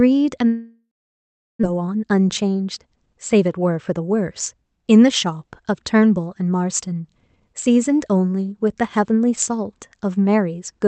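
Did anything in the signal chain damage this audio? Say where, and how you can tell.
Yes. At the network stage, a long network dropout likely cut the stream from 0.47 to 1.65 s. The last sound is drawn out into a fading buzz, then 730 ms of silence follows, and about a second of speech never comes back.

A jitter buffer speed-up runs from 1.73 to 2.86 s. With excess delay built up after the gap, the receiver snips out short pitch-period slices again and again, about a tenth of a second in total, so speech plays 10% fast at unchanged pitch and sounds hurried.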